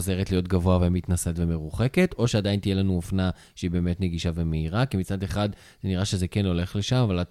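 Speech recording; no technical faults detected.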